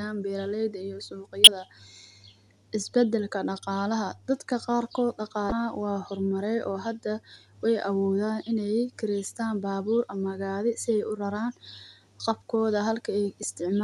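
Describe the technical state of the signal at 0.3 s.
At 0.3 s the speech signal is intact, with no audible fault at that moment.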